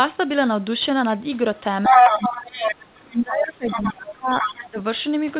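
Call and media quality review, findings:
Other side's voice leaking through at 1.83–3.06 s, sitting about 10 dB over the talker, then again quieter, around 5 dB under, at 3.66–3.92 s and 4.29–4.65 s; likely residual loudspeaker echo the canceller missed.

Speech suppressed in double talk at 1.89–2.76 s, dipping up to about 15 dB, and 3.07–4.79 s, up to about 20 dB; likely the canceller ducking the talker along with the echo while both talk.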